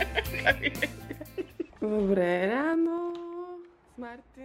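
A level reduction between 2.55 and 3.16 s is applied in coarse 3 dB jumps, around seven per second, with no smoothing, bringing the sound down by roughly 15 dB. Each jump leaves a small click, so zipper noise ticks over the audio.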